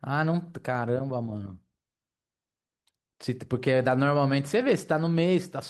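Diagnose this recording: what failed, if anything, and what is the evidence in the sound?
The network stage dropped audio in a skip ahead at 2.37 s. The speech jumps forward with no filled gap. Roughly a third of a second is missing. It was discarded while later audio was already queued, cutting latency abruptly.

A jitter buffer speed-up follows from 2.46 to 3.54 s. The speech runs at 110% speed and sounds hurried, yet the pitch stays put. The buffer held excess audio, so it trimmed short pitch-period pieces repeatedly, about a tenth of a second in total.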